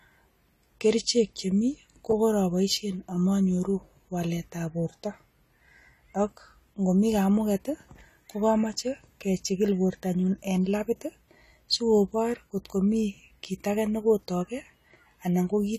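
From start to finish the speech sounds dull and smeared, with a watery, warbly quality on held vowels and a fizzy edge on the s sounds. There's nothing at all above 14 kHz. That's the signature of AAC compression, likely AAC-LC at a low bitrate, something like 32 kbps, where the encoder drops the top end and starves the remaining bands of bits, so the damage is plainly audible.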